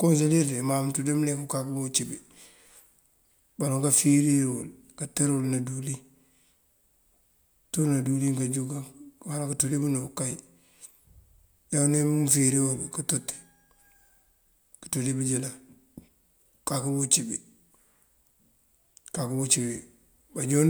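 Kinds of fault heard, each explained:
No technical faults can be heard anywhere in the speech; the signal stays continuous and steady in level, with no breaks, distortion or added noise.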